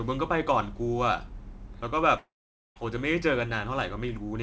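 A long network dropout runs from 2.18 to 2.78 s, likely from audio packets failing to arrive. The receiver stretches the last speech sound into a brief fading buzz or hiss, then 0.48 s of silence follows before speech resumes with 0.58 s of it lost. The sound stops at 8 kHz throughout, which fits a G.722 call path at 64 kbps.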